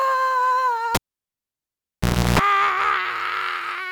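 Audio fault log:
0.95–2.39 s, cable pulled and plugged in: a pop as the live lead comes out, about 1.4 s of near silence, then roughly 0.34 s of 60 Hz mains buzz while only the plug tip touches, and a second pop as the signal reconnects.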